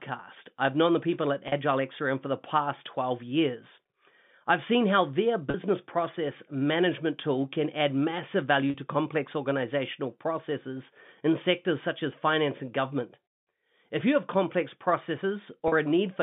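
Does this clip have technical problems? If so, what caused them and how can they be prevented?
Yes. Packet loss with pitch repetition occurs at 1.48, 5.5, 8.7 and 15.68 s. Each is a 40 ms gap, which fits two lost 20 ms packets on the G.711 telephone line. The receiver filled each hole by repeating the last pitch period, so the speech briefly holds on a slightly buzzy tone before carrying on. Preventing it means a more reliable network path, a properly sized jitter buffer, and forward error correction or redundant packets.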